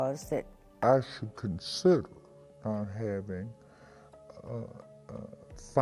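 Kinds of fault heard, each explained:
Wrong sample rate: from 0.83 s to the end, the sound runs at 0.726 times its proper speed and sits 5.55 semitones low. Speed and pitch drop together because the samples are clocked out too slowly without conversion, which fits 44.1 kHz material played at 32 kHz.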